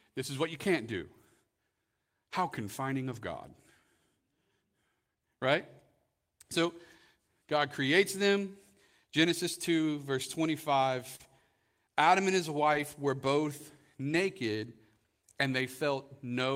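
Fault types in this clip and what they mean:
Lost packet rebuilt from error correction: dropped packets replaced by low-bitrate copies from the next packet, so no gaps, just brief rough, noisy patches up to 60 ms long.
Short concealed packet loss: about 40 ms never arrived around 11.15 s, so the decoder extended the previous sound and blended back, leaving a quick smear.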